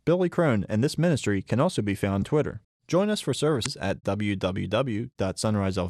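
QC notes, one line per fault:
2.18 to 2.23 s and 3.62 to 3.66 s, damaged data in a compressed stream. Each disruption lasts about 40 ms. The first comes right after "ministry can also be", the second right after "us for". Part of the coded data at those points is wrong. The decoder misreads or rejects those frames and loses sync. It then searches for the next valid frame header. Correct decoding briefly stops, so the speech breaks off abruptly before normal audio returns.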